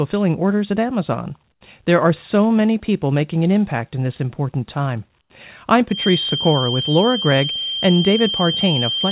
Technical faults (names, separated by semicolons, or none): comfort noise in place of the background; feedback whistle